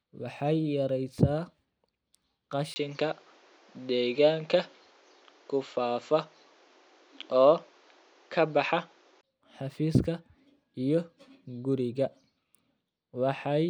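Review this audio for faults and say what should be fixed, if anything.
From 2.74 to 9.23 s the speech dulls above 7.6 kHz, shifts about 5 dB in level and gains its own background noise about 35 dB down after a 20 ms gap. This is likely an input switched to a poorer device, not mere filtering, which adds no new noise. Lock the recording input so it can't change mid-session.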